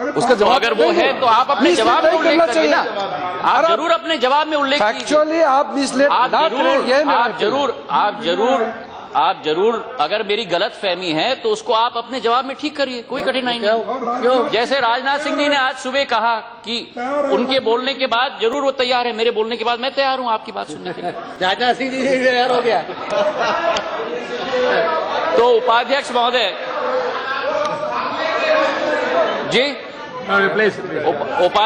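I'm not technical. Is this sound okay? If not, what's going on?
No. A repeated buffer causes three tiny clicks, at 13.19, 18.53 and 21.35 seconds. Each time, new sound arrived late, so the player replayed its last 12-millisecond sliver once more, with a hard join. That length fits a 512-sample buffer.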